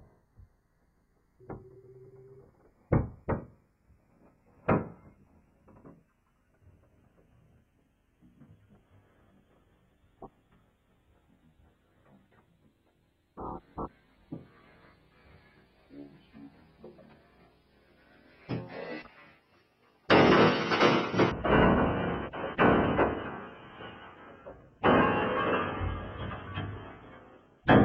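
From 21.32 s to the end, interleaved stereo samples are being read as a single mono channel (stereo read as mono), so each left-right pair is played as two consecutive samples. The audio runs at 0.5x speed and drops a full octave, 12 semitones. A faint mirrored copy also sits in the upper half of the spectrum.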